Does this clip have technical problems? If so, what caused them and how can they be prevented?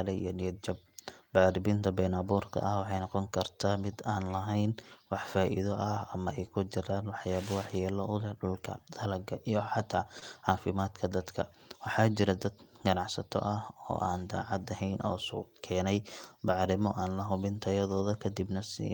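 Yes. Short concealed packet loss at 10.19 to 10.23 s, between "dulka dalaga iyo xata" and "cafimadka dadka": about 20 ms of speech arrived too late, so the receiver extended the preceding sound and blended back, leaving a brief smear. A larger jitter buffer or forward error correction would prevent it.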